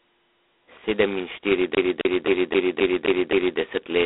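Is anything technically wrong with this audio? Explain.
Yes, there are two faults.

G.726 ADPCM runs throughout. The speech is coded as a few bits of difference from a running prediction, and the heavy, rasping hiss that rises and falls with its level fits the 16 kbit/s rate. Only 250 Hz to 3.4 kHz comes through, with nothing above 3.9 kHz.

A CD stuck on one turn appears from 1.75 to 3.59 s. A scratch keeps sending the laser back one track, so the same 0.26 s of sound plays seven times, about four per second, with a brief mute at each jump: an even, mechanical stutter.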